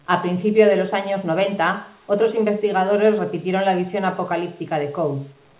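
No technical faults are audible.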